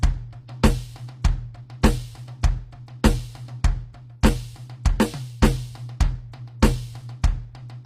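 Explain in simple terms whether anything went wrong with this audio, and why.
Throughout the music, the treble sounds bright but gritty and plainly metallic, and nothing is heard above 15.5 kHz. That points to HE-AAC compression, likely, which rebuilds the highs by copying lower ones. Plain muffling would sound dull instead.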